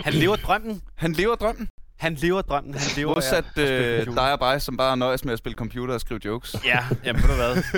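A short hole opens at 1.70 s and runs to 1.78 s, 80 ms long. A briefer dropout of 20 ms follows at 3.14 to 3.16 s, and at 5.55 s a 12 ms gap is heard as little more than a tick. Each is a block of digital silence: samples replaced by zeros, likely because the output buffer went unfilled in time, with a hard cut to and from silence.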